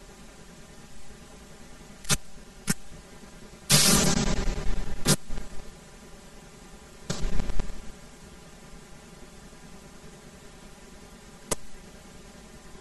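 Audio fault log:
Throughout: channel delay (comb filtering). One channel arrives roughly 5 ms behind the other, and summing them to mono cancels the shared speech at evenly spaced frequencies. The first notch sits near 100 Hz, with further notches about every 200 Hz above it, giving a hollow, phasey tone. Unlike flanging, the notches never sweep. Unlike simple low-pass dullness, the highs still come through, just ribbed with regular gaps.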